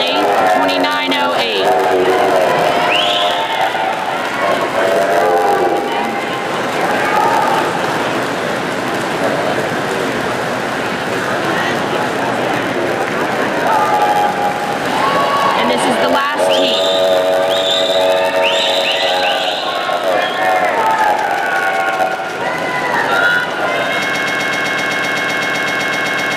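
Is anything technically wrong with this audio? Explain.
Yes, two faults are audible.

A block size mismatch (padded) runs throughout. Each short block is topped up with zeros, producing a 91.9 Hz buzz and playback at 0.919 speed with timbre unchanged.

From 24.14 s to the end, a broken-record loop repeats a 127 ms fragment 18 times, likely from a stall that kept resending the last piece held.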